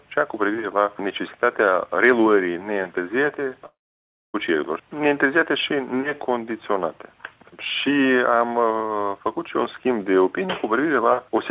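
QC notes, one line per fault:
3.66–4.36 s, long network dropout: the sound breaks off and the receiver's concealment stretches the last moment into a buzzy or hissy, fading tail, which thins out within less than a tenth of a second. About 0.62 s of near-silence follows, and audio resumes at 4.36 s with roughly 0.68 s of material simply gone. This is likely a run of lost packets on the call path. That path's 4 kHz ceiling fits a G.711 mu-law codec at 64 kbps.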